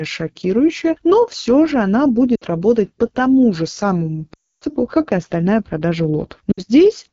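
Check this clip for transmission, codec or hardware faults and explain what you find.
Two faults are audible: coarse low-rate wideband coding throughout, and three dropouts where speech frames went missing.

AMR wideband (HD Voice) codec, throughout: the speech sounds rough and raspy, with a hissy top end. That fits AMR-WB at the 8.85 kbit/s mode, near its lowest rates, where the pulse-driven vocal tract model runs short of bits and noise stands in above 6.4 kHz.

Lost AMR speech frames, at 2.35 to 2.44 s, 4.33 to 4.64 s and 6.52 to 6.61 s: each drops to near silence within two frames, and the speech returns weakly. These gaps point to about 60, 280 and 60 ms of frames that failed their radio checksum. The decoder repeated its last good settings at falling gain.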